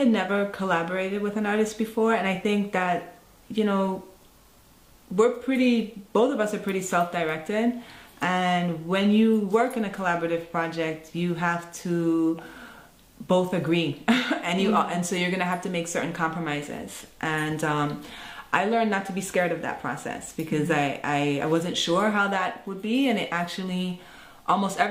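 Nothing goes wrong anywhere in the clip, so there's no technical fault to describe here.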